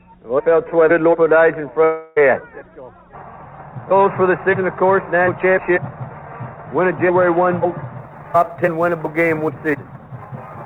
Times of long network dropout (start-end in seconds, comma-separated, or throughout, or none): 1.84-2.18